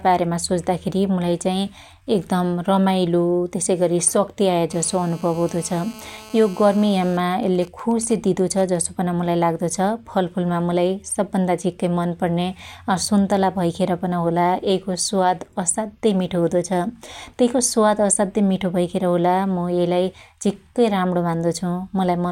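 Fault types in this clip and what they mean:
GSM phone buzz: A nearby 2G phone on a call transmits bursts at about 217 Hz, and the audio circuitry rectifies them. From 4.71 to 7.13 s a hard, raspy buzz with many harmonics sits about 22 dB below the speech, steady and unrelated to it.
GSM signalling bursts: Once that phone's user falls silent in the call, it sends only short groups of bursts, again rectified by the audio path. From 7.14 to 8.76 s a pattern of even ticks with a longer 217 Hz buzz twice a second, at roughly 20 dB below the speech, runs until "पन मुलाई लाग्दो".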